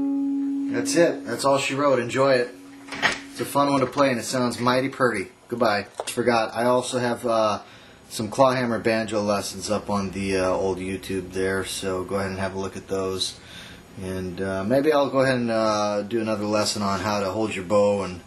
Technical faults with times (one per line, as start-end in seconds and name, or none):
15.07 dropped samples